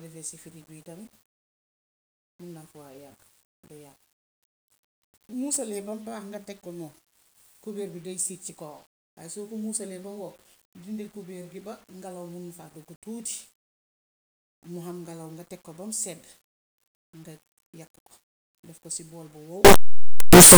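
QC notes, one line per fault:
19.65–20.58 s, signed and unsigned mixed up: sudden, very loud, harsh distortion, with quiet parts as loud as the rest, likely from 8-bit samples read with the wrong sign convention.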